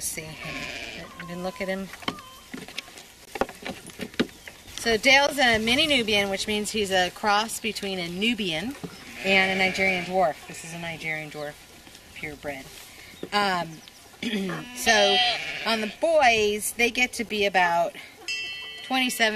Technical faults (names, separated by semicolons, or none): gap between stream segments